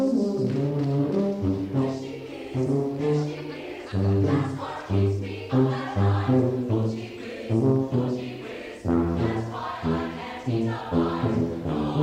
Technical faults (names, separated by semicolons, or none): none